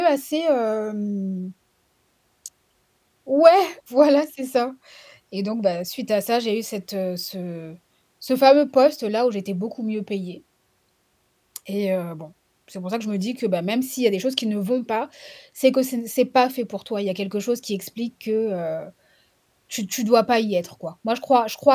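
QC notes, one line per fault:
No faults found.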